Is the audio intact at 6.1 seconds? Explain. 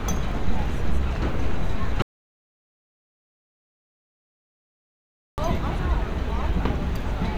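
Yes, the audio plays through 6.1 s intact, with no dropout, click or distortion at that moment.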